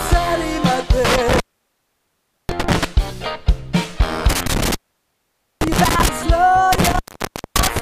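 Intermittent contact hits three times: 1.05 to 2.85 s, 4.29 to 6.09 s, and 6.73 to 7.79 s. A loose cable or plug keeps opening, so the sound drops out with crackle at each edge and faint hiss underneath, for roughly 1.09, 0.85 and 0.57 s respectively.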